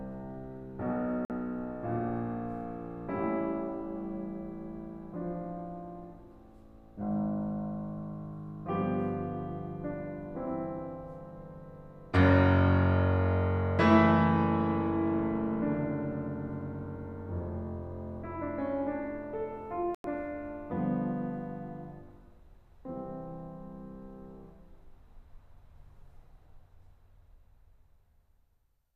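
At 1.25 s the music cuts abruptly to silence for about 48 ms and picks up again at 1.30 s. At 19.95 s a longer gap of about 96 ms follows, ending at 20.05 s. Both are digital broadcast dropouts: the receiver stopped getting decodable frames and muted until valid ones came back, so the material sent during each hole is simply gone. The gap lengths fit whole lost frames of about 24 ms each. Unlike a buffer underrun, playback resumes further along rather than stalling and continuing where it left off.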